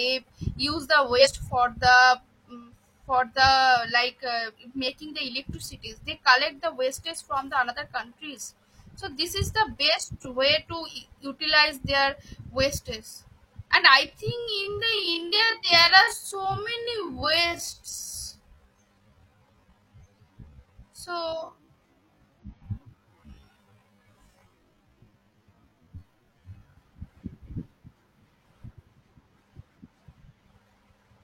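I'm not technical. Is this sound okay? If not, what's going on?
No. There are three kinds of problem in this speech.

Compressed frames skipped: at 1.16 to 1.28 s, 16.07 to 16.14 s and 22.39 to 22.44 s, small chunks of the recording are missing. The audio jumps forward a fraction of a second each time.

Corrupt frame decoded: at 6.91 s and again at 12.73 to 12.78 s, one damaged piece of the file was played anyway. The sound is wrong for that instant. It comes out as a brief chirp or burst of noise, quiet the first time and louder the second.

Time-stretched section: from 14.05 to 26.77 s the speech suddenly runs at about 0.56 times normal speed while the pitch stays the same. It sounds drawn out. This is likely software stretching that part to fill a set length.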